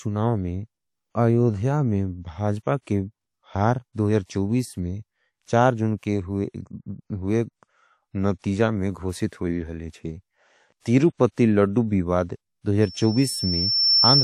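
Speech with a short hiss smearing five attacks, at 2.81, 3.93, 4.26, 5.97 and 10.80 s, each 39 to 55 ms long: pre-echo, where a transform codec's block-wide quantisation noise spills ahead of sharp onsets. From 12.82 s to the end, a 5.4 kHz tone swells over about a second to roughly 5 dB above the speech. That is loudspeaker feedback squeal, the microphone re-amplifying its own loudspeaker at that frequency.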